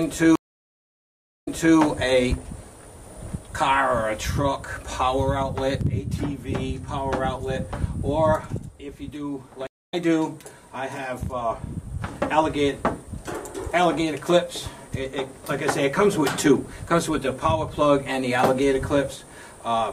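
At 0.35 s a stream reconnect cuts the audio for about 1.1 s. The connection drops, a fresh decoder starts, and playback resumes 0.31 s earlier, repeating material. A second reconnect at 9.67–9.94 s leaves a 0.26 s gap and jumps roughly 0.2 s ahead.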